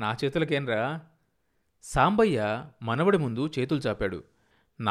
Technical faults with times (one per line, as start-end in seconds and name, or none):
none